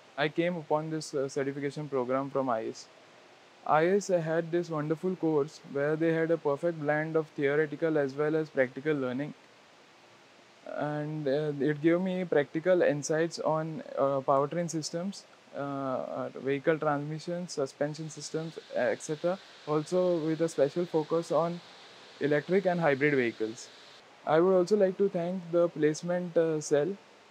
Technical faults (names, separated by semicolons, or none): none